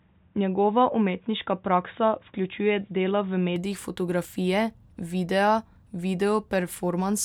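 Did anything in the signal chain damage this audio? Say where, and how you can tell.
Yes. From the start to 3.56 s the speech is dull and boxy, with nothing above 3.8 kHz and a faint, separate noise floor well below the speech; at 3.56 s it opens up with no gap or level jump. On a spectrogram there is a flat ceiling at 3.8 kHz that ends abruptly. This is likely an input switched to a poorer device at the capture stage, such as a narrowband headset profile.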